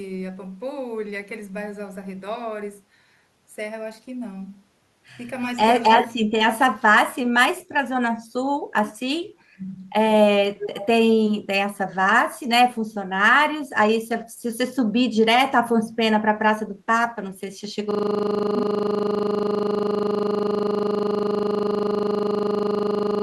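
From 9.13 to 9.7 s the speech dips sharply, by as much as 35 dB, for about half a second in total. This is likely speech suppressed in double talk: the echo canceller could not tell this talker from the far end and attenuated both.

At 10.58 to 10.87 s a delayed copy of the speech surfaces, trailing the original by 322 ms at roughly 10 dB below it. The likely cause is an echo leak, where the far end's echo canceller let loudspeaker pickup through and it returned down the line.

From 17.91 s to the end of the clip, a single 40 ms fragment repeats exactly, producing a steady 25 Hz buzz in place of the speech. This is a system hang loop. The system stalled while the audio hardware kept replaying the same short stretch of its ring buffer.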